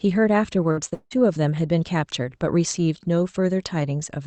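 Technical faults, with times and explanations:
0.71–0.79 s, burst of packet loss: a run of packets never made it in time, so the receiver stretched the last bit of speech into a buzz or hiss for about 57 ms while fading it down. About 60 ms of real speech is skipped when things pick up again.
0.89–0.94 s, short concealed packet loss: a tiny hole, with about 20 ms of audio gone. The decoder papered over it for roughly 25 ms by extrapolating the previous sound, then crossfaded back, so you hear a quick smear or wobble.
0.94–1.13 s, long network dropout: right after that, the sound hangs on as a fading buzz or hiss for about 170 ms, the last 70 ms or so of it fully quiet. The likely cause is nothing arriving at all for that stretch, so about 180 ms of speech never comes back.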